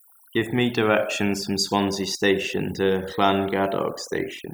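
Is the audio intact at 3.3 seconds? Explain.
No. Overdone noise removal runs through the whole clip, including 3.3 seconds. Bands near the noise floor are cut away, leaving twinkling near-silence.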